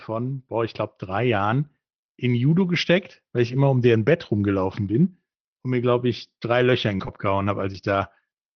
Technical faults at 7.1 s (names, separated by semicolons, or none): short concealed packet loss; lost packet rebuilt from error correction